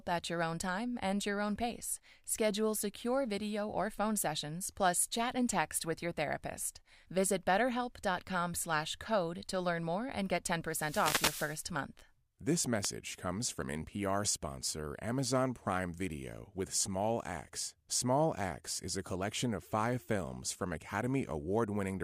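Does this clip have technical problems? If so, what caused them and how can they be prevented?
Yes. A burst of static swishes over the speech from 10.66 to 11.69 s, after "learn more and get", and a brief hit at 12.83 to 12.87 s, just before "comes from". These are wireless microphone noise hits: the FM radio link faded as reflected signals cancelled, letting receiver noise surge through. Prevent them with diversity receivers, good antenna placement and line of sight, and a short transmitter-to-receiver distance.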